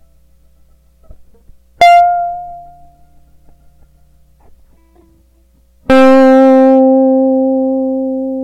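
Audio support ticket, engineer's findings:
Hard clipping on music peaks, 1.81–2.01 s, overdrive about 10 dB. Brief crackle. Waveform tops sliced flat. Likely a converter or fixed-point stage overloaded. Peaks exceed its range and get truncated.

Hard clipping again, 5.90–6.81 s, overdrive about 12 dB. Sustained harsh fuzz on loud passages. Flat-topped waveform throughout. Spectrogram shows broadband harmonic smear reaching far above the music's content.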